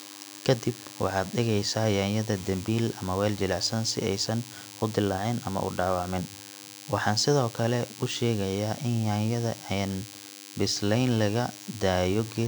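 A nearby DECT cordless phone's radio bursts, rectified by the audio circuit, produce a DECT cordless phone buzz: a thin, steady 100 Hz buzz beneath the speech from start to finish.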